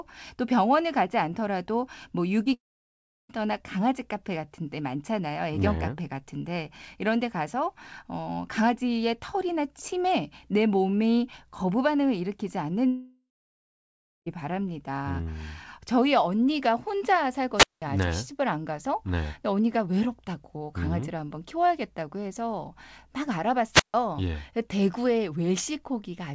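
At 2.44 to 2.47 s there is a short concealed packet loss. About 20 ms of the stream failed to reach the decoder in time, and the receiver bridged the gap by extending the preceding sound for roughly 15 ms before blending back into the real signal. It comes across as a brief smear or wobble in the speech, not a clean gap.

Just after, from 2.53 to 3.31 s, the audio drops out. The last sound is carried on briefly as a fading buzz or hiss, then about 0.69 s of near silence follows before speech resumes with the missing part simply gone. This is likely a long network dropout, where the receiver's concealment ran out. The same pattern recurs from 12.87 to 14.28 s: a decaying continuation, then about 0.99 s of silence, and speech returning further on.

At 17.56 to 17.82 s and again at 23.72 to 23.94 s there are wireless microphone squelch dropouts. The radio signal fades, hiss rises briefly, and the receiver's squelch mutes the output for about 0.19 s and 0.15 s respectively, leaving a hole of near silence before the signal comes back. 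These sit upstream of the call link, whose band limit is audible as nothing above 8 kHz, which fits a wideband call codec such as G.722.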